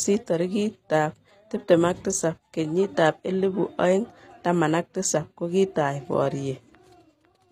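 A speech recording, likely squeezed through HE-AAC compression at a low bitrate consistent with roughly 24 kbps, so only the lower spectrum is properly coded and the treble is synthesised by spectral band replication. Across the whole clip the top end sounds artificial: the regenerated highs do not track the real harmonics above the crossover, and sibilants come out gritty, metallic or lispy, a plainly audible codec coloration from start to finish.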